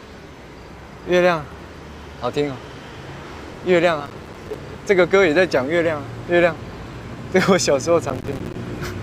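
Processor overload crackle hits from 4.00 to 4.58 s, then again from 8.10 to 8.55 s. The processor misses dozens of buffer deadlines in a row. Each miss leaves a hard-edged silent gap, which fits buffers of roughly 5 ms. The sound tears gritty, then clears.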